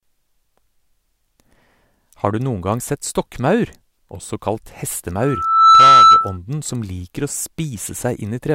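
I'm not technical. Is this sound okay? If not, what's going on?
No, there's a problem between about 5.19 and 6.38 seconds: a loudspeaker feedback squeal. The microphone is picking up the loudspeaker it's feeding, so the sound loops around and around, and one pitch, about 1.3 kHz, keeps reinforcing itself. You can hear it swell over roughly half a second into a piercing whistle that ends up much louder than the speech before it cuts off.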